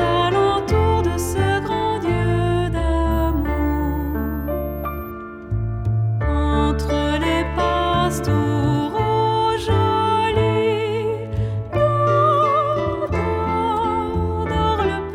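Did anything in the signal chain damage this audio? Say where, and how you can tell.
Yes. Between 3.11 and 5.11 s, a switching supply whistle enters at the analogue wiring stage. It is a thin, high tone around 15 kHz, wandering between 12.5 and 16.1 kHz, sitting roughly 25 dB under the programme. A switched-mode power supply dropping into audible burst mode, or beating against a second supply, couples its switching frequency onto the analogue lines, and its pitch slides as the load shifts.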